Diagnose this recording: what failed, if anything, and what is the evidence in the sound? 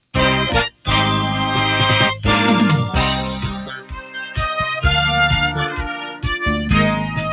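The failure is in call processing: a noise suppressor built for speech was left active on non-speech audio. Throughout the clip the level swings by roughly 10 dB as the suppressor repeatedly decides that sustained material is noise, giving a pumping, fluttering quality. On a waveform the envelope breathes irregularly, with attacks intact but sustained passages sagging. On a spectrogram, steady bands fade in and out in blotches rather than holding as continuous horizontal lines, all within a band that stops at 4 kHz from the G.711 call path.

There are three deep cuts where the noise suppressor treats the sound as noise and pulls it well below its neighbours: 0.70 to 0.88 s (drop of about 17 dB), 3.43 to 4.37 s (about 16 dB, roughly a second affected), and 5.69 to 6.25 s (about 11 dB). Sustained or decaying sound collapses early in each span, cutting off tails. The waveform shows sudden hollows in the envelope, and the spectrogram shows matching dark vertical gaps.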